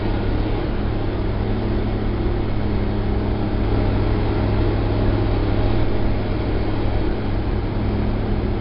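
A gritty hiss rides on every loud moment from start to end, with roughness on sharp attacks, and nothing is heard above 5.3 kHz. This is heavy 4-bit ADPCM compression: coarse adaptive steps leave level-following noise, and the bandwidth fits a rate near 44 kbps.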